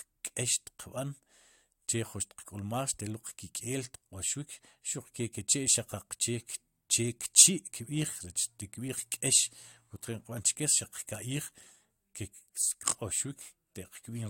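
There are no technical faults to describe at any point in the audio.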